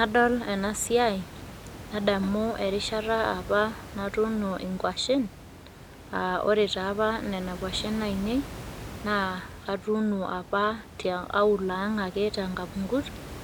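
No technical faults are audible.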